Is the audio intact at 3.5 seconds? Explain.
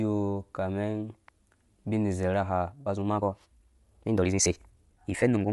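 No. From 2.59 s to the end, including 3.5 s, there is a time-stretched section: the pace jumps to about 1.75 times faster while pitch stays put, likely from software dropping short pieces, so it sounds rushed rather than chipmunk-like. Throughout, Bluetooth LC3 compression is plainly audible: nothing above 11.5 kHz and a breathy, grainy upper edge from noise-filled bands, likely a low-rate LE Audio link, unlike the watery swirl of other lossy codecs.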